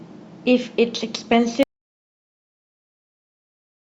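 At 1.63 s the speech drops out to dead silence and stays that way right to the end, an audio dropout to silence. There's no room tone at all, so the input was likely lost, maybe a disconnected mic or a stray mute.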